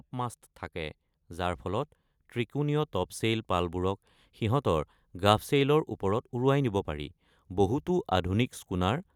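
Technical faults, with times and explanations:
0.11–1.95 s, automatic gain rising: the speech and the background swell together by about 4 dB over nearly two seconds. The automatic gain control judged the input too quiet and raised its gain slowly. Both voice and room noise climb at once.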